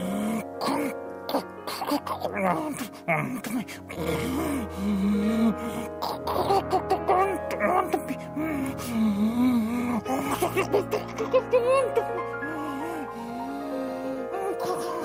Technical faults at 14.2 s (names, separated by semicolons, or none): short concealed packet loss